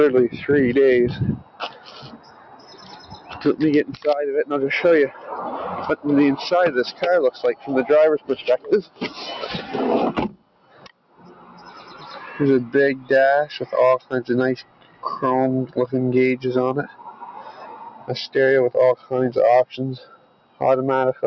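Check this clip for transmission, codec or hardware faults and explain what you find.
One fault is present throughout the clip, a speech noise suppressor left running on this material, and it produces repeated level cuts. The call's microphone processing shows no content above 8 kHz, which is expected for that path.

Noise suppressor applied to music or sounds, from start to end. A suppressor tuned for speech treats steady tones, ambience and decaying tails as noise and pulls them down, while sudden attacks slip through. Its gain here swings over a range of around 15 dB as it decides what counts as noise. The result is audible pumping and thinning, with sustained parts of the sound sinking away instead of holding steady.

Sound cut by the noise suppressor, at 1.38–3.44, 5.09–5.29, 6.92–9.73, 10.29–12.37, 13.99–15.04, 16.87–18.09, 18.96–19.11 and 19.98–20.61 s. In each span the suppressor judged the sound to be noise and turned it down harder than the rest. 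The deepest drops range from about 8 dB to about 13 dB, with most reaching about 13 dB. The affected portions last from a brief moment to roughly two seconds, so held or fading sound dips or has its decay cut short.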